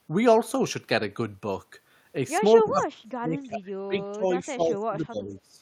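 From 2.64 s to the end at 5.6 s, the speech keeps ducking, dropping as much as roughly 30 dB, which sounds like speech suppressed in double talk, likely an echo canceller clamping down.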